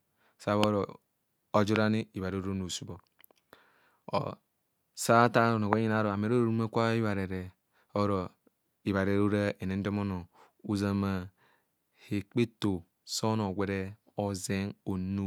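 The clip is speech, and three loud pops break into it. They fall at 0.64 to 0.66 s, 1.76 to 1.78 s, and 5.73 to 5.75 s, the last just after "or sa athaa". Each is a single sharp click, roughly 20 dB above the speech. The speech carries on beneath each one. The likely cause is a brief electrical spike, from a plug, switch, static discharge or driver glitch, entering the signal path.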